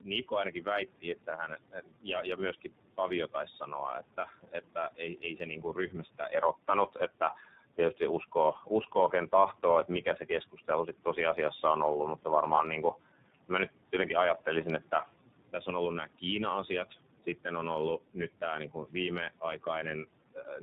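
Throughout, tandem speech coding: the call was decoded and re-encoded through two low-rate speech codecs in a row, fitting AMR-NB then iLBC. It sounds rough, muffled and warbly, with nothing above 3.8 kHz.

From 1.71 to 2.06 s, the noise suppressor cut speech, mistaking part of it for noise and pulling it down by about 12 dB for roughly a tenth of a second. That stretch sounds swallowed and faint.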